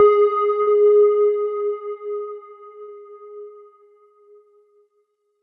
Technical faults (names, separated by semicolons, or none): burst of packet loss